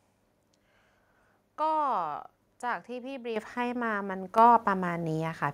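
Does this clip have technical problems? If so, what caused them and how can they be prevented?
Yes. The microphone volume was stepped up twice, at 3.36 s by about 8 dB and at 4.38 s by about 5 dB. Each time the call software judged the input too quiet and raised the device gain in one step, so speech and background jump together. On a waveform the envelope widens abruptly. On a spectrogram every band, including the noise floor, brightens along a vertical edge. Turning off automatic microphone gain adjustment and setting a fixed input level prevents it.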